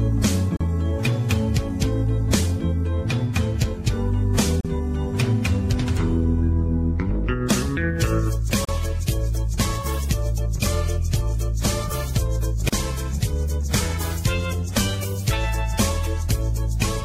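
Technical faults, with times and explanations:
0.57, 4.61, 8.65 and 12.69 s: gap at a join of encoded pieces. Each is a 40 ms break, repeating every 4.0 s. The pieces were encoded separately, and the encoder's start delay and end padding were left in, so the sound stops briefly and then resumes where it left off. On a spectrogram each break looks like a narrow blank vertical stripe with smeared edges. In the waveform it is a brief notch.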